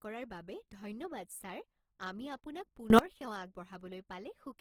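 From start to finish the speech sounds rough and grainy, the codec damage plainly audible, though the band still reaches to about 20.3 kHz, so nothing sounds muffled. This points to Opus compression at a low bitrate, fitting roughly 16 kbps, running in its CELT music mode: every band keeps its energy, but with too few bits the finer detail is rebuilt by folding lower bands or filling with noise, which turns the voice coarse rather than swirly.

At 2.90 s the level leaps up by about 24 dB, speech and background noise together, and stays raised until 2.99 s before dropping back. The change is instant, with no fade in or out, which marks it as a sudden gain jump. The likely cause is a digital gain setting or bit shift applied from one sample to the next without a ramp, then removed just as abruptly.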